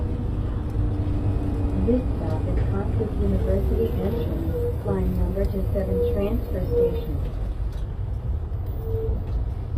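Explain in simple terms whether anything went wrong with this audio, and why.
Across the whole clip, the top end sounds bright but not quite real: crisp, hissy parts of the sound come out gritty and metallic, and nothing sits above roughly 15 kHz. This is most likely HE-AAC compression, working hard to squeeze the file very small. It keeps only the lower part of the sound accurately and rebuilds the treble by copying lower bands upward, so the high detail is an imitation rather than the original.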